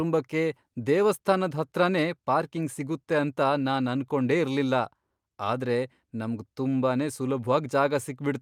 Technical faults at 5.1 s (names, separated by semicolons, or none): none